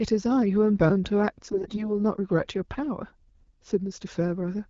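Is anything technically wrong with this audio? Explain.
Yes, there's one spot. From about 1.52 to 1.89 s you get AMR bit errors. A burst of heavily corrupted frames got through because the checksum only guards the critical bits. The excitation pulses and fine gain and spectral values come out scrambled, so the speech keeps its rough pitch and level but goes hoarse, scratchy and gargly for that stretch.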